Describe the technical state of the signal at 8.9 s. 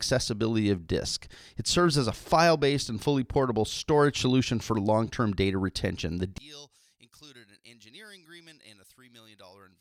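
One channel inverted is the likely cause from 6.38 s to the end. Summed to mono, the speech cancels, falling about 28 dB to a faint trace.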